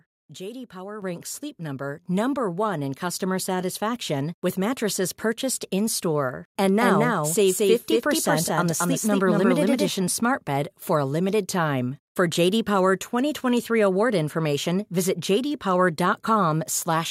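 Speech, with two microphone volume stepped up events: at 1.02 s the level of voice and background jumps together by about 8 dB, then again at 2.04 s by about 4 dB, as the call software raised the device's input volume in single steps. From 6.64 s to 9.88 s, just before "smart bed for a", a doubled audio track appears: a full-band copy trails the original by about a fifth of a second at roughly equal level, dry and without room colour, starting and stopping abruptly, likely from a second, slower capture path.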